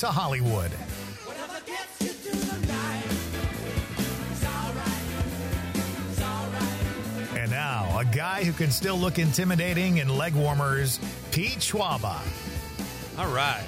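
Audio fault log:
No faults are heard anywhere in this audio. Nothing in it calls for an entry in the log.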